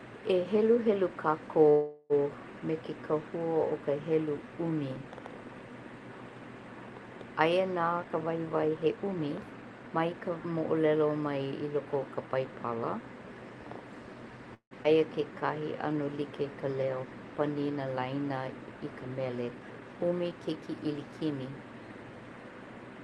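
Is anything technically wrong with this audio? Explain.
Yes. The speech has timing faults typical of a network call.

Call audio freeze at 1.69–2.13 s and 14.54–14.74 s: the sound hangs as a fading buzz, about 0.40 s the first time and about 0.17 s the second, where it includes about 90 ms of silence. Speech then resumes where it stopped. The likely cause is late packets draining the jitter buffer, so the receiver stretched the last audio and then continued with nothing lost.

Jitter buffer speed-up at 8.04–10.30 s and 19.59–20.75 s: the speech sounds hurried but keeps its pitch, running at about 117% and then 115%. After a backlog built up, the receiver trimmed many tiny pitch-period slices, roughly 0.4 s and 0.2 s in total, to shrink the delay.

Skip ahead at 14.83–14.87 s: right after the second freeze, playback jumps forward with almost no gap, and about 70 ms of speech is missing. 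Late audio was discarded while newer audio was already queued, so the two sides are butted together.

Jitter buffer slow-down at 15.25–15.94 s: the speech drags at unchanged pitch, running at 93%, with sounds drawn out. With the buffer running short, the receiver repeated individual pitch periods, adding 57 ms in total to rebuild its reserve.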